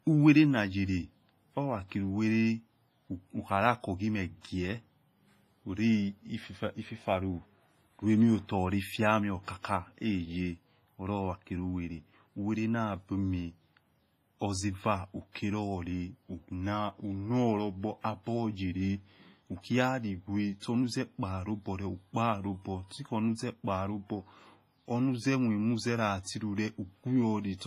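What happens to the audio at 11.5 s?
At 11.5 s the speech is passing through what is likely WMA compression, a fault present across the whole clip rather than at that moment alone. A transform coder with long blocks smears its quantisation noise over tens of milliseconds and drops weak spectral lines, and the damage here is heavy, pointing to a low bitrate around 24 kbps. Nothing survives above 15.5 kHz, and the speech sounds ringing and washy, with hiss that breathes along with it.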